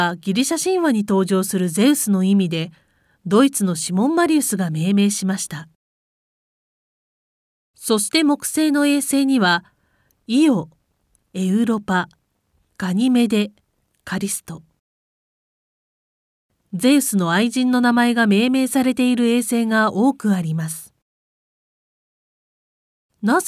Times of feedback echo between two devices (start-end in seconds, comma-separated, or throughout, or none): none